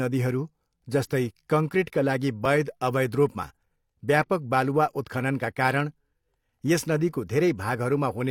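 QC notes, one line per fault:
2.45–2.49 s, overlap between stream segments: after "जस्तै कङ्क्रिटका लागि", about 40 ms of speech is trimmed at a segment boundary, so the waveform jumps into "अवैध रूपमा" as a tiny skip.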